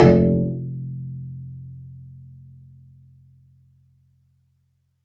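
From start to finish the sound pumps and thins: sharp onsets come through, but sustained parts and their tails sag by around 10 dB. This is a noise suppressor applied to music or sounds, a speech-tuned suppressor treating steady tones and ambience as noise, within a call band topping out at 8 kHz.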